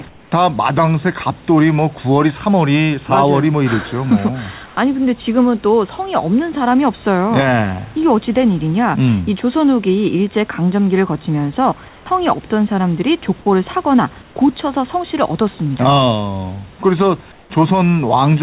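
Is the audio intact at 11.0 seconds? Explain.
Yes, the audio is intact at 11.0 seconds, with no fault at that moment.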